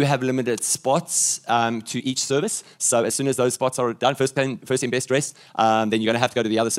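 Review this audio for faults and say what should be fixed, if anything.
Software likely time-stretched everything from 1.93 s onward to 1.59 times speed, dropping short pieces to keep pitch, so the pace abruptly turns rushed. To prevent it, fit the audio to length by editing or resampling the source rather than applying a forced time-stretch.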